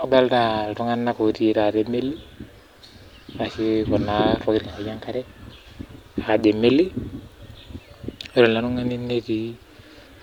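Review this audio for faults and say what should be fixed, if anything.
No faults can be heard anywhere in the recording. Nothing needs to be fixed.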